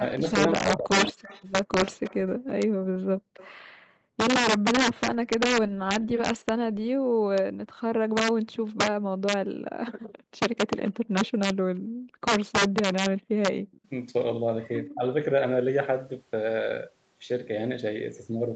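Integer overflow runs through the whole speech clip. Peaks driven about 7 dB past full scale wrap to the opposite sign instead of limiting, so roughly one percent of samples flip across the range and loud syllables carry hard cracks, harsher than clipping.

From 0.0 to 1.23 s there is speech suppressed in double talk. The level dips in pieces, down by around 40 dB at worst over roughly 0.7 s in total. The likely cause is an echo canceller ducking the near talker while the far side is also active.

From 1.22 to 3.5 s an echo leak adds a copy of the speech 187 ms late, about 20 dB below it. Residual loudspeaker pickup likely got past cancellation.

From 2.37 to 4.17 s the background is gated by the echo canceller. The room sound drops by up to 40 dB for about a second in total and then recovers. The same thing happens from 5.68 to 7.23 s, for about half a second in total.

A brief echo leak at 8.65–8.78 s returns at about 30 dB down. 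The background is gated again from 9.57 to 13.3 s, for about a second overall. That gating overlaps a longer leak from 10.87 to 13.81 s, at about 25 dB down, with the same 187 ms delay.

A short double-talk dip of around 25 dB falls at 14.94–15.04 s.

The band ends at 8 kHz, consistent with a wideband call codec.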